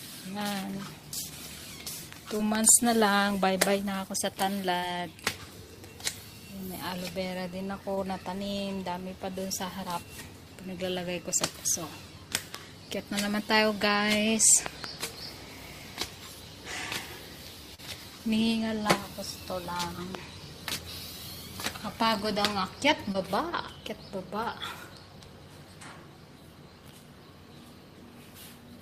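At 2.37 s comes a short concealed packet loss. About 20 ms of audio arrived too late, and the receiver filled the gap by continuing the preceding sound. It is heard as a brief smear. On a spectrogram it shows as a thin, blurred patch where the detail goes flat. At 2.55 to 2.71 s, two loud pops sit about 20 dB above the sound, likely from a voltage step such as a static discharge or switching transient. Each appears as a tall spike in the waveform and a full-height vertical line on the spectrogram. Concealed losses recur at 4.79 and 7.95 s. A single pop follows at 12.55 s, then a double pop at 14.66 to 14.86 s. A longer 40 ms loss comes at 17.74 s, a single pop about 15 dB up at 20.15 s, and a final loss at 23.12 s.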